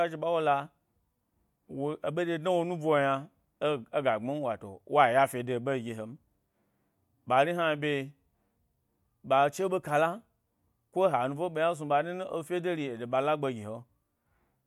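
Nothing stood out as a technical problem on listening to this speech recording.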